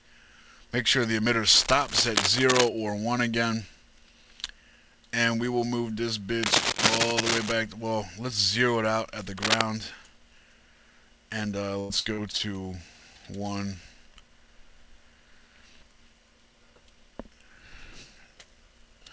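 A worn cable or connector being moved is the likely cause of the cable scratch noise at 1.5 to 2.69 s, 6.43 to 7.52 s and 9.37 to 9.62 s. Its contact resistance jumps around, laying dense, uneven scratching bursts over the sound at roughly its own level.

From 11.80 to 12.41 s, repeated packet loss leaves five holes, the longest 94 ms. The receiver papers over each by extending the last sound, which covers about a third of the stretch. The result is choppy, robotic audio with pieces missing. This happens on a call path whose band stops at 8 kHz, which fits G.722.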